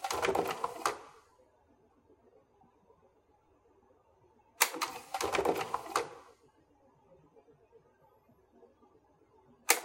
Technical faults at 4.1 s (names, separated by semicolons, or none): none